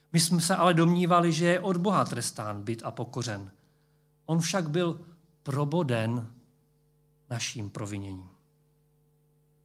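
No technical faults can be heard anywhere in the recording.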